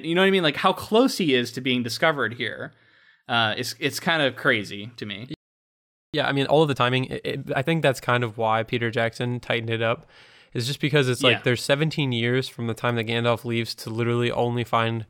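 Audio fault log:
5.34 to 6.14 s, playback stall: the speech cuts out in mid-flow and the output falls silent for about 0.80 s, then resumes. The likely cause is the player running out of buffered data or its output thread being blocked.
6.14 to 7.72 s, time-compressed catch-up: right after the gap, the speech runs hurried at about 1.5 times normal speed while keeping its pitch. Small pieces are cut out and cross-faded to shed the backlog.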